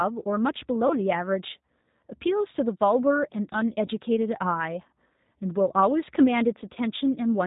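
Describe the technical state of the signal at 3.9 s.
Right around 3.86 to 3.90 s there's a dropout covered by VoIP packet loss concealed by the speech codec. About 20 ms of audio goes missing, which fits a single lost packet. The decoder fills the hole by running on from its last pitch and filter settings at falling gain, so you hear a short stretched patch, a buzzy tone or coloured noise that fades. Because each frame leans on the one before, the sound stays a bit weak and off for a moment after it comes back.

Underneath that, the whole clip carries G.729 codec damage, plainly audible here too. The sound is being rebuilt from a vocal-tract filter, a pitch predictor and a handful of pulses per frame, which fits G.729A at 8 kbit/s. That gives it a slightly rough, synthetic edge, and nothing comes through above 4 kHz, so the speech sounds narrow and dull on top.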